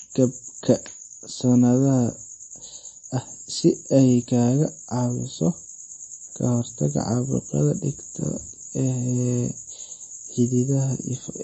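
Throughout the speech, the sound is watery and swirly with nothing above 8.3 kHz, likely MP3 compression, which fits a bitrate near 32 kbps.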